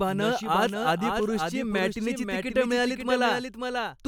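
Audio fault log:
throughout: doubled audio track. A second copy of the speech runs about half a second behind the first, roughly 5 dB quieter. It is full-band, with no decay or room colour. This is likely a slower second capture path mixed in with the original.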